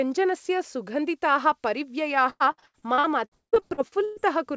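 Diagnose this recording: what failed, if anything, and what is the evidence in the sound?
Network stage: repeated packet loss (robotic sound) from 2.30 to 4.18 s. The sound turns choppy, with pieces missing, and about 43% of that stretch is concealment, with gaps up to 170 ms. The jitter buffer keeps extending the last received audio over each missing packet.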